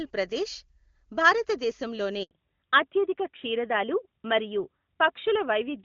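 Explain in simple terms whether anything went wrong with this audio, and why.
Two things went wrong, one right after the other. At about 2.23 s there is a handover gap. The phone switched the call from one network to another, and for about 80 ms no speech got through. The voice fades out almost at once and stays silent until 2.31 s, so whatever was said in that moment is simply missing. A single clean hole like this, with the sound changing afterwards, is what sets it apart from ordinary patchy signal, which causes repeated small breakups.

From 2.31 s to the end there is a fallback to narrowband. Before the switch the call was in HD Voice, with crisp, airy detail. After it, the call drops to an older phone codec that carries nothing above 4 kHz. The voice turns duller and flatter, like an old landline, and the sharp edges of sounds such as s and f lose their hiss. Unlike a muffled microphone, this change happens suddenly at the handover and then holds steady for the rest of the call.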